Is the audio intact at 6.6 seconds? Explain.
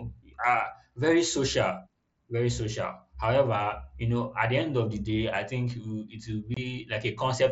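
No. Just before it, at 6.54 to 6.57 s after "will it will", unconcealed Bluetooth headset packet loss leaves a hole of about 22 ms, which fits three lost mSBC frames replaced by silence or an idle pattern. The spectrogram shows a full-height vertical gap, and the cut edges are abrupt.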